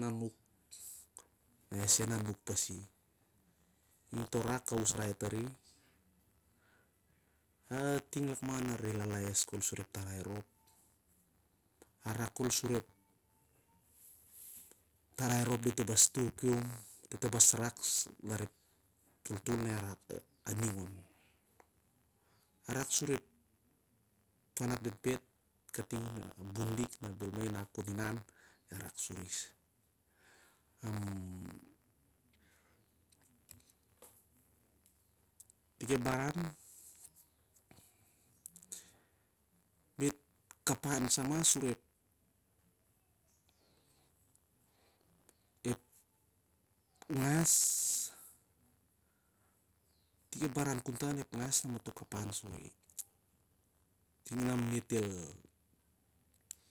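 Speech with buffer tearing from 0.81 s to the end: a steady robotic rattle near 93.8 Hz, fitting a 512-sample buffer, heard only during sound, unlike mains hum.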